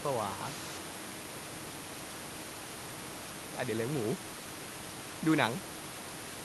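No technical faults in this speech recording; the room noise sits about 14 dB below the speech, and the top end rolls off near 12 kHz, which fits an Opus call path at around 32 kbps.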